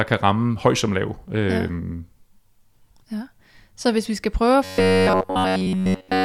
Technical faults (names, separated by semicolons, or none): robotic sound from repeated short buffers